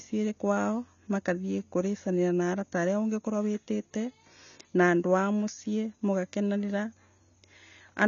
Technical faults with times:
0.00-8.07 AAC compression

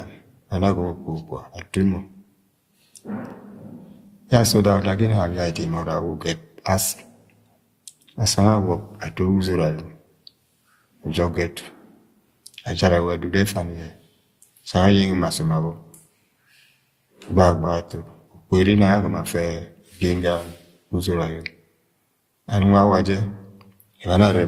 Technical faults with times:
0.00-24.47 transcoding between lossy codecs

